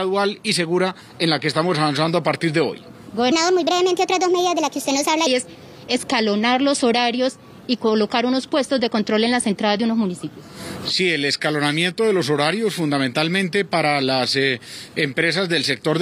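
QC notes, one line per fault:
3.32–5.27 s, section at the wrong speed: this stretch was likely resampled against a mismatched clock, so it runs 1.29 times too fast. Pitch and pace rise together, lifting the sound by about four semitones and making it hurried and thin before normal speed returns.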